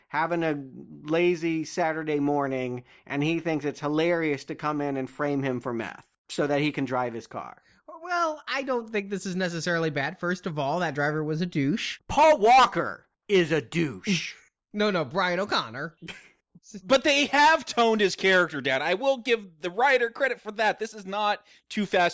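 No technical faults can be heard anywhere in it.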